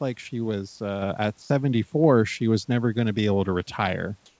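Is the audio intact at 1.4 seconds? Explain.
No. From 1.42 to 1.50 s, about 80 ms of the speech is missing and steady hiss takes its place. This is sound dropped by the voice detector, likely because the sender's detector judged that quiet stretch to be background, stopped transmitting, and left the receiver to fill the gap with comfort noise. Unlike packet-loss concealment, nothing repeats, warbles or stretches. Unlike a hard dropout, the gap is filled with flat noise rather than a click or dead silence.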